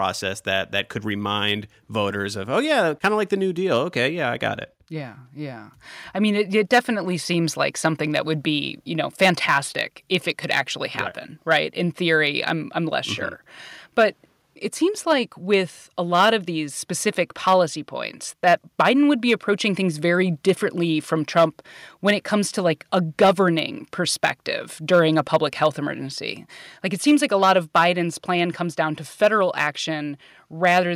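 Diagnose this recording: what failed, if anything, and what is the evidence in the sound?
Hard clipping runs through the whole speech recording, most likely at the converter input or a gain stage ahead of it. The signal was driven about 4 dB past full scale, so the loudest peaks, a small fraction of samples, are sliced flat, producing brief crackle on emphatic syllables.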